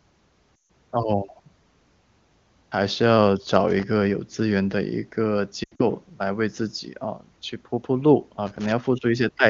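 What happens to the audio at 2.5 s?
Nothing goes wrong at 2.5 s; the speech there is intact, carried through the AMR wideband (HD Voice) codec at its top rate of 23.85 kbit/s, where any coding damage is faint at most.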